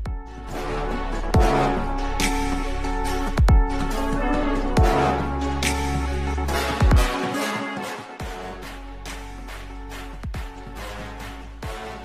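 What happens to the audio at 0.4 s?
Nothing goes wrong at 0.4 s: the audio plays through that moment intact, with no dropout, click, distortion or other fault to be heard.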